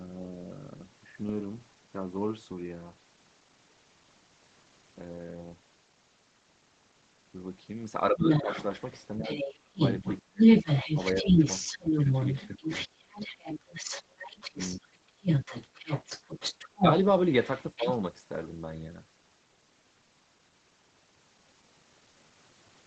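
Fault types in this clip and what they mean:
Speech suppressed in double talk: The talker's voice dips sharply in six places while a second voice is also present, at 8.11–8.49, 9.18–10.43, 11.22–11.89, 12.55–12.99, 14.4–14.85 and 17.77–17.86 s. The drops run from roughly 15 dB to about 30 dB, deepest around 9.2–10.4 s, and last from about 100 to 700 milliseconds each. The likely cause is an echo canceller that could not tell near speech from loudspeaker echo and attenuated both.
Other side's voice leaking through: From 8.2 s to about 18.0 s a second voice runs underneath the talker at roughly the same level as the main speech, not as faint scraps. Its span overlaps every one of the suppression dips. The likely cause is a far-end voice played on the talker's loudspeaker and picked up again by the microphone, with the echo canceller leaving much of it in place. The audio is band-limited to 8 kHz, consistent with a call path.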